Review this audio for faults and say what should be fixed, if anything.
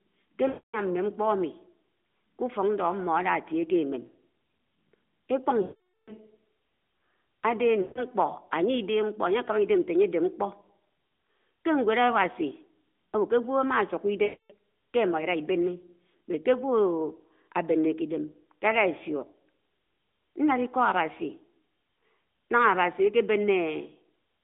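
Lost AMR speech frames at 0.48–0.80, 5.62–6.13, 7.82–8.05 and 14.24–14.54 s: the decoder stretches the last good pitch and vocal-tract settings with falling gain. On a spectrogram, the harmonics smear flat and fade. The waveform shows a decaying envelope and then a gap. To prevent it, improve the radio link or add stronger channel coding and retransmission.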